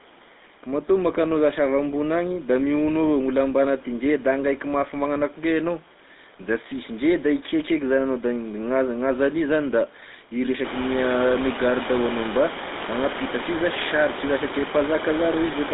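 Throughout, the speech has a buzzy, gravelly roughness and a thin, boxy tone with nothing above 3.8 kHz. This is the GSM full-rate codec, consistent with 13 kbps, rebuilding speech from a coarse pulse excitation. The background room noise jumps by about 21 dB from around 10.5 s, and it still stays about 11 dB under the speech.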